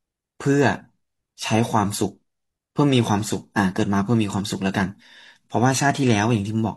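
Compressed frames skipped at 4.97 to 5.02 s: about one 42.7 ms frame goes undecoded, so the speech jumps ahead roughly 40 ms.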